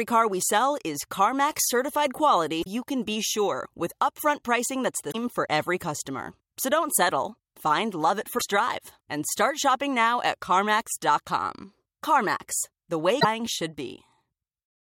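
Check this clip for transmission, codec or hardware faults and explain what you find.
Four short bursts of damaged data in a compressed stream occur in this speech clip, at 2.60–2.67 s, 5.08–5.15 s, 8.35–8.42 s and 13.18–13.25 s. Corrupted frames make the decoder lose sync and hunt for the next header, producing brief glitches lasting about 70 ms.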